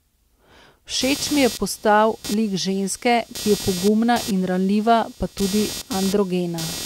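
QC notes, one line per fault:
1.01–6.85 s, computer activity noise: a buzz pulsing around 200 times a second sits roughly 15 dB under the speech, from computer load changes shifting the shared audio ground.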